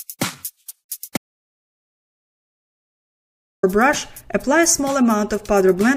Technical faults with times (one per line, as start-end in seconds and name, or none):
1.17-3.63 audio dropout to silence